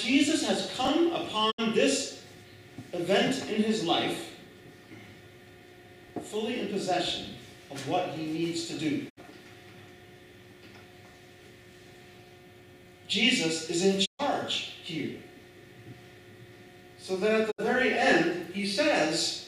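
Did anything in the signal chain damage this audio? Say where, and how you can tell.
Yes. Chunks out of order in the buffer or storage stage: around 0.85–0.90 s and 6.04–6.10 s, roughly 21 ms blocks play late, giving jumbled moments.

Digital broadcast dropout at reception: the sound fades out over about 20 ms and goes silent at 1.50, 9.08 and 17.50 s (64 ms holes) and at 14.04 s (128 ms). That fits whole lost frames being muted.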